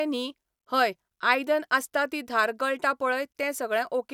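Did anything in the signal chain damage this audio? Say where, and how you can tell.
No, nothing in the chain audibly damaged this recording.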